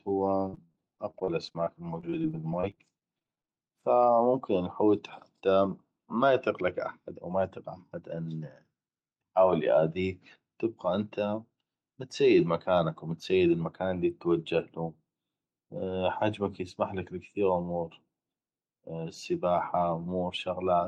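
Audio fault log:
0.37 to 3.50 s, repeated packet loss (robotic sound): the speech turns choppy, with 29 short dropouts packed into about three seconds, the longest about 71 ms. Each time packets failed to arrive, the receiver bridged the hole by stretching out the last sound it had, so about a fifth of this stretch is synthetic continuation rather than real audio. Around 500 ms of speech is simply missing, and the repeated fill gives the buzzy, robotic edge.
3.40 to 4.05 s, jitter buffer slow-down: the speech drags here, running at about 90 percent of normal speed while keeping its pitch, so sounds come out drawn-out. Right after the burst of losses the receiver's buffer was running low or had just raised its target delay, so it bought time by repeating single pitch periods and bits of pause over and over, adding about 73 ms in all to rebuild a reserve before carrying on.
4.12 to 6.62 s, jitter buffer speed-up: the speech runs slightly fast, about 4 percent fast at unchanged pitch, up to the words "احد أو". 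The buffer was holding more audio than it wanted, so the receiver trimmed the excess by cutting out short pieces of one or a few pitch periods many times in a row, removing roughly a tenth of a second overall to bring the delay back down.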